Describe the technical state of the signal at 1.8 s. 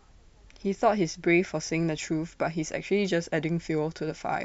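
At 1.8 s the speech signal is intact, with no audible dropout, distortion, noise or other technical fault at that point.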